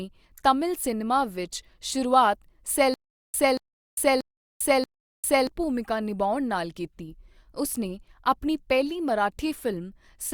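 From 2.94 to 5.47 s, the stream likely stalls and replays its last fragment on each retry, producing a stutter with silent gaps. The same 232 ms burst of speech repeats four times, every 633 ms, with 400 ms of digital silence between, and the speech due in that stretch is lost.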